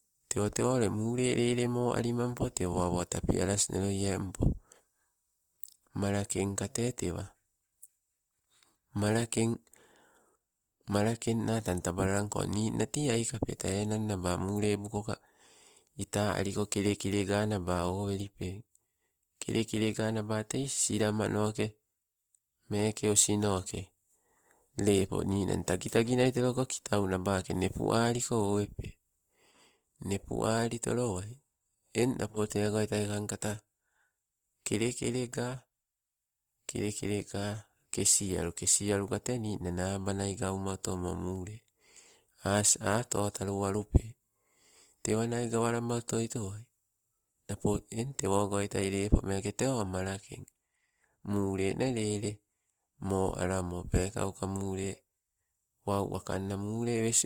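Throughout the speech, the sound is grainy and rough, with a noisy texture laid over the tones rather than swirling or dropouts, and content extends up to about 20.2 kHz. This points to likely Opus compression in its CELT music mode at a low rate, consistent with roughly 24 kbps. The encoder preserves each band's energy but, starved of bits, fills bands with folded or noise content, so detail turns granular.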